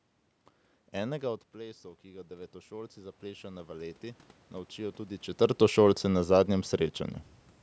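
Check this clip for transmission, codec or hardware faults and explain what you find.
One fault stands out: automatic gain rising, from 0.94 s to 5.32 s. Around 1 s the speech level drops by about 15 dB as the talker moves away from the microphone. The automatic gain control reads this as too quiet an input and raises its gain slowly, by about 12 dB over the next four seconds. The speech creeps back up, and the room noise swells with it. That shared swell is what marks it as gain control and not the talker's movement. When a talker simply comes closer, the speech gets louder while the background stays put. Here the speech level does change at about 1 s and 5 s through movement, but the slow ramp of speech and noise together comes from the processing.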